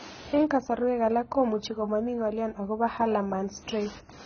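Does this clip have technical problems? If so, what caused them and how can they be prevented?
Yes. Heavy AAC compression damage runs through the whole speech clip. Nothing survives above 6.5 kHz, so it sounds dull and smeared, with fizzy sibilants. The likely cause is AAC-LC at a very low bitrate, which fits roughly 16 kbps. On a spectrogram this shows as a flat, hard ceiling at 6.5 kHz across the full clip. Encoding at a higher bitrate, or keeping a lossless master, would prevent it.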